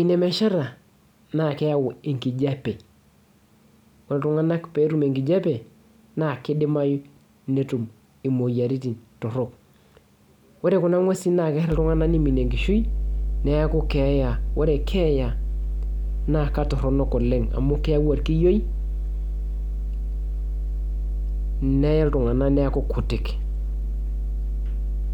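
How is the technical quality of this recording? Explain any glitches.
The recording has one clear fault: mains hum. From 11.72 s to the end, a steady 50 Hz tone with low harmonics sits roughly as loud as the speech, likely from a ground loop or nearby transformer leaking the power line into the signal. Unlike broadband rumble or handling noise, it holds one fixed pitch and never varies.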